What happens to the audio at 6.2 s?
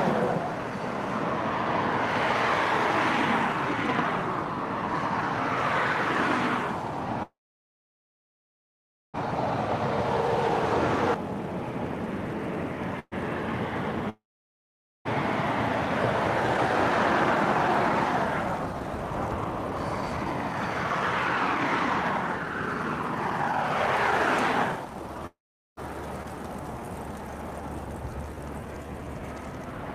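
A truncated block size mismatch runs through the whole clip, so it is present at 6.2 s. One stage writes blocks longer than the next reads, and each block's tail is dropped. The result is a steady 43.1 Hz buzz, which fits 1024-sample blocks, with the audio's speed staying at 1.0 times normal.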